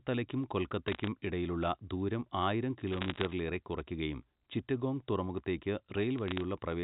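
Speech over a telephone-band line, with bit errors on the digital phone line in three bursts: 0.88–1.07 s, just before "ഇടയിലുള്ള ദൂരം ആയിരം"; 2.92–3.33 s; and 6.18–6.41 s. Roughly one bit in a few hundred is flipping, and each flip corrupts a single sample, so you get sharp ticks and a crackle laid over the speech.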